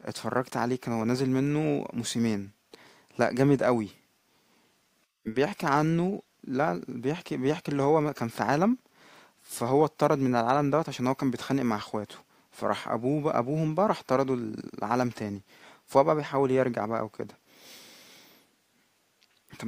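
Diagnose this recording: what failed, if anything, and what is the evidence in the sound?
Nothing in the signal chain failed: the speech runs continuously, with no audible defect at any stage from capture to playback.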